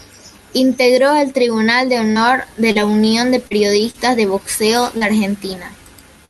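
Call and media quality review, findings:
Scattered short gaps, 2.11 to 5.04 s, starting right after "el tribunal de": around five brief ticks and smears, longest about 40 ms. Jitter buffer/PLC patching single lost or late packets by stretching the last sound through the Opus call path.

Burst of packet loss, 6.25 to 6.30 s, at the very end: a 40 ms chunk goes missing, filled with about 46 ms of held, fading tail. Several consecutive packets dropped or late, and the concealment decays as the gap goes on, running into the end of the clip.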